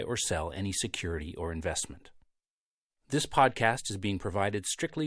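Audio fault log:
No fault to log; none can be heard anywhere in the speech.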